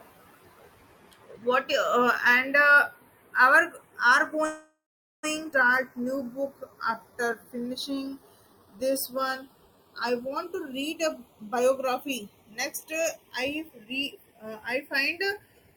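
Speech summed to mono, and the first thing you notice is a slow flanging running the whole length. That's the two channels drifting apart. The left and right sides came off devices on separate clocks that disagree by a few tens of parts per million, so the offset between them keeps creeping. It reaches a bit under half a millisecond by the end. Fold it to mono and the comb notches from that tiny delay sweep slowly through the spectrum. Right after "our are", from 4.45 to 5.25 s, there's a call audio freeze. The last sound gets stretched into a fading buzz or hiss for a moment, then drops to roughly 0.45 s of silence before the speech resumes exactly where it left off. That's most likely packets held up in transit and the jitter buffer running dry. So about 0.78 s of gap gets inserted and nothing is lost. Then at 5.51 to 5.54 s it goes the other way with a skip ahead. Playback jumps forward with only about 10 ms of fill, and something like half a second of audio is gone. 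The two sides butt together almost directly, as if the backlog was dumped to catch up. From 5.89 to 10.34 s you get a jitter buffer slow-down. The receiver repeats single pitch periods and slivers of pauses to rebuild its reserve, so the talking runs at about 89% speed with the pitch unchanged. That adds about 0.48 s, and you hear drawn-out sounds. Finally, from 10.44 s to 15.75 s there's a jitter buffer speed-up. Short pitch-period chunks get cut out over and over to trim excess delay. That pushes it to about 107% speed at the same pitch and drops around 0.4 s in total, so the delivery comes across hurried.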